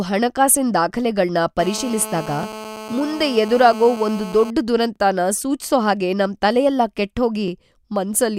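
From 1.59 to 4.51 s, just after "ಹಣಕಾಸಿನ್ ದಾಖಲೆಗಳ್ನ", a nearby 2G handset on a call causes GSM phone buzz: the audio circuit rectifies its transmit bursts, producing a steady, raspy 217 Hz buzz about 14 dB below the speech. The stream was processed in overlapping chunks about 2.5 s long, so at each join 23 ms of audio plays twice, causing brief stutter-clicks at 2.43–2.46 s, 4.96–4.98 s (just before "ಸೂಚ್ಸೋ ಹಾಗೆ"), and 7.48–7.50 s.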